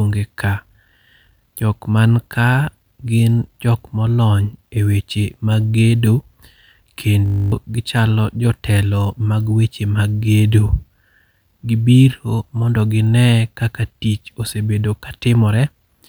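Speech plays normally until a system hang loop at 7.26 to 7.52 s. A single 20 ms slice of audio repeats exactly, 13 times in a row. Because the slice is so short, the repeats fuse into a steady buzz at 50 Hz rather than a stutter. The cause is a frozen computer or driver while the sound hardware kept replaying one stretch of its ring buffer. The loop length points to a buffer of about 20 ms. Roughly a third of a second of real audio is lost.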